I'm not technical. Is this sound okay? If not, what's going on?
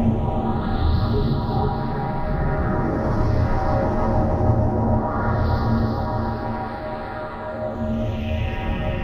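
No. There are two brief glitches, heard as a chirp, squawk, click or short hole, at about 0.61 and 7.73 seconds. That's damaged data in a compressed stream: a small part of the file was corrupted, so the player stumbled and had to find its place again.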